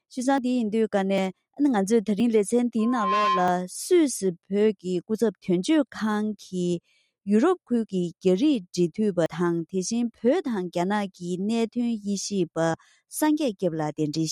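Small forward jumps in the sound occur at 0.38, 1.18, 2.2, 3.48, 5.2, 9.26 and 12.74 s, most likely dropped buffers (overrun), each losing a few tens of milliseconds. On the waveform each shows as an abrupt seam with no silent gap. From 2.78 to 3.66 s a loudspeaker feedback squeal at 1 kHz swells over a fraction of a second until it is about as loud as the rest of the audio. A spectrogram would show it as a single bright horizontal line.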